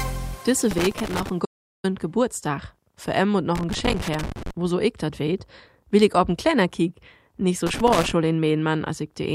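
Loose connector crackle from 0.71 to 1.29 s: a worn contact making and breaking gives irregular scratching rather than a single clean click. At 1.45 s an audio dropout to silence removes about 386 ms. The gap is silent with no room tone, unlike a quiet passage, and was likely caused by a lost input or stray mute. Loose connector crackle returns from 3.55 to 4.51 s and from 7.67 to 8.12 s.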